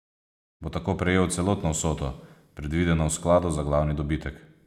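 No technical faults can be heard in the speech. The level rises in a smooth fade-in from around half a second, reaching full level at 0.63 s without any click or hard edge.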